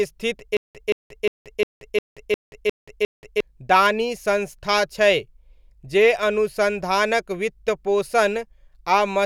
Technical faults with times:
0.57-3.40 stutter with silent gaps

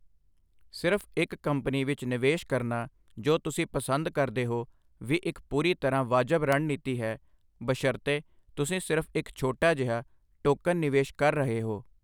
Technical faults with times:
1.01 bit error spike
2.82 bit error spike
6.52 bit error spike
9.62 bit error spike

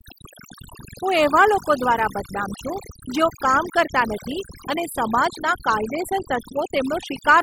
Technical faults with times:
0.00-7.42 overdone noise removal

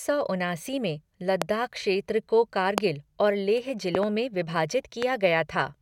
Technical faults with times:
1.42-1.44 loud pop
2.78-2.80 loud pop
3.95-4.05 loud pop
5.02-5.04 loud pop

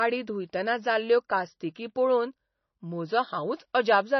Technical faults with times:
0.00-4.20 MP3 compression

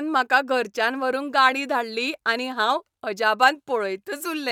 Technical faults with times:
none

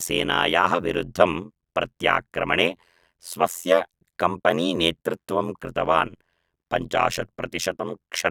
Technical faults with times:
0.00-8.30 overlap-add ripple

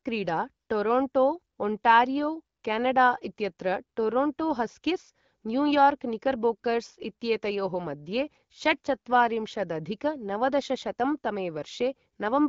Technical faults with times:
none

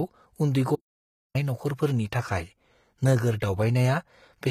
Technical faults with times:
0.00-4.50 HE-AAC compression
0.75-1.35 audio dropout to silence

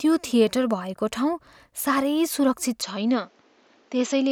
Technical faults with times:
2.82-4.32 input switched to a poorer device

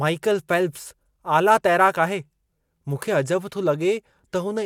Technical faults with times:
none

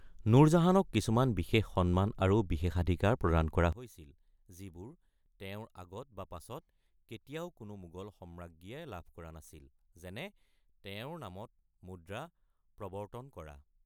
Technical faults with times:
3.72-13.86 one channel inverted

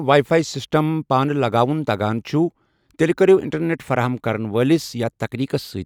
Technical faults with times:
none

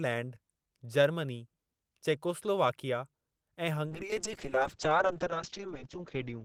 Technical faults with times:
3.87-6.45 call bitrate drop

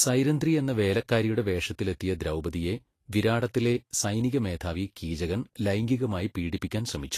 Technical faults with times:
0.00-7.17 Vorbis compression

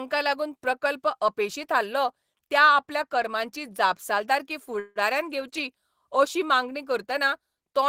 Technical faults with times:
4.79-4.99 call audio freeze

